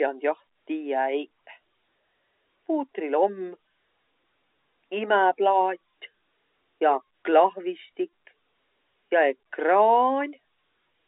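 Speech over a telephone line, with no technical faults.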